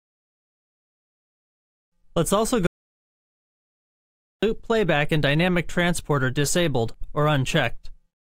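At 2.67 s the sound cuts to total silence until 4.43 s, an audio dropout to silence. Nothing survives for 1.76 s. Likely the input was lost.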